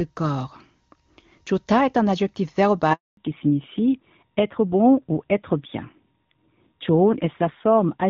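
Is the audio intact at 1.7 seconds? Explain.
Yes, the speech at 1.7 seconds is intact, with no fault present at that moment.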